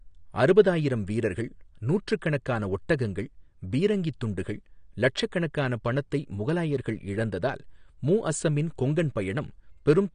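From start to finish the speech sounds dull and smeared, with nothing at all above about 9.7 kHz, so the top end just stops. Sibilants come out fizzy and watery rather than crisp, and sustained sounds have a warble. That's most likely AAC compression, AAC-LC at a low bitrate, which fits something around 32 kbps: the encoder pulls its cut-off down and quantises the remaining bands coarsely, leaving gaps it can't fill cleanly.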